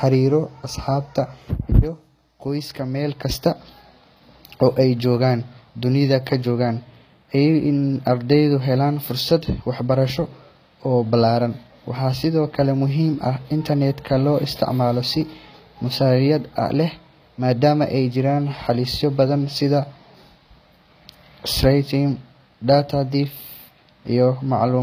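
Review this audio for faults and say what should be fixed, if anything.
Gritty, metallic treble runs through the whole speech clip, with s sounds lispy and nothing above 15.4 kHz, most likely HE-AAC compression at a low bitrate near 24 kbps. Spectral band replication rebuilds the top by copying lower bands upward, so the treble stays bright but its harmonics don't align, unlike a plain low-pass, which just sounds dull. Encode at a higher bitrate with a full-band codec setting.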